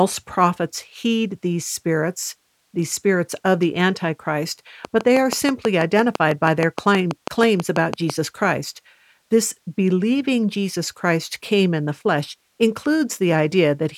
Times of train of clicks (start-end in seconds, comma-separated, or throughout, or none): 4.85-8.11